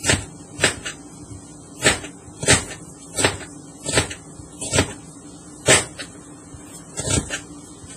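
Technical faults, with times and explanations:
Throughout, WMA-style compression, likely: heavy ringing, washy smearing and signal-following hiss, with nothing above 15.4 kHz, unlike MP3's sharper swirling, consistent with roughly 24 kbps.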